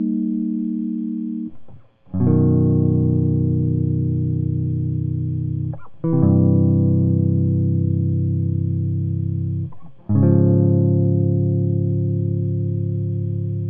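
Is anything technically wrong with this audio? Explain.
No, nothing technically wrong stands out here; this bit of music sounds just as it should the whole way.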